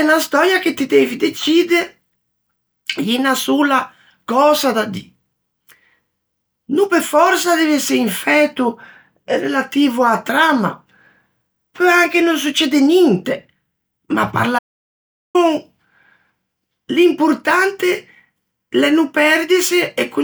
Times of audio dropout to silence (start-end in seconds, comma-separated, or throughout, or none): 14.59-15.35